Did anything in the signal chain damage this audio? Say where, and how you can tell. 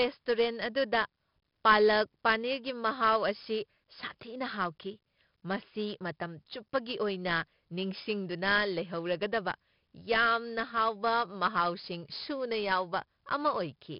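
Yes, the codec stage. The speech carries 4-bit ADPCM compression from start to finish, and it's heavy. There's a gritty hiss riding on every loud syllable that rises and falls with the level, plus roughness on sharp onsets where the adaptive step can't grow fast enough. Nothing comes through above 5.3 kHz, which fits a low sample rate near 11 kHz and a stream of about 44 kbps, so the voice sounds dull as well as grainy.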